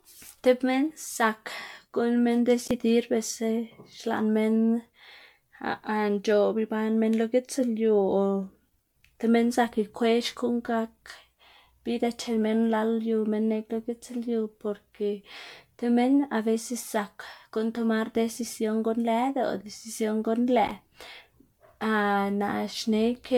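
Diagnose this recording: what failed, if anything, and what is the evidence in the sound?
Codec stage: generation loss, present throughout the speech. The sound is swirly, smeared and hollow, with blurred attacks and nothing above 19.9 kHz, worse than a single 128 kbit/s MP3 pass would give. Likely about ten re-encodes, each requantising on a shifted frame grid.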